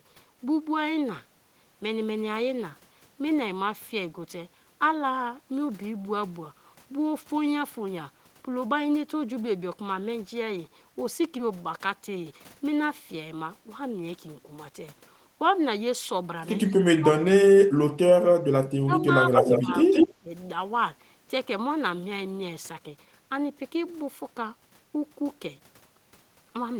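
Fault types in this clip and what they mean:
Skip ahead: at 11.39 to 11.41 s, roughly 0.4 s of speech is missing, and playback jumps forward with no gap filled.
Jitter buffer speed-up: from 11.51 to 12.57 s, speech runs about 7% fast at unchanged pitch as the receiver trims roughly 0.1 s to reduce buffered delay.
Echo leak: at 16.70 to 16.74 s a faint copy about 40 dB down arrives 217 ms late, and from 19.33 to 20.15 s one as loud as the speech arrives 176 ms late, likely from incomplete echo cancellation.
Speech suppressed in double talk: at 16.97 to 18.15, 18.52 to 19.24, 19.60 to 19.68 and 20.20 to 20.31 s, speech dips by up to about 35 dB, likely from the echo canceller during simultaneous talk.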